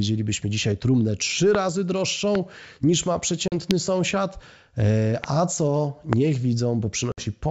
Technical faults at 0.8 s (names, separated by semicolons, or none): none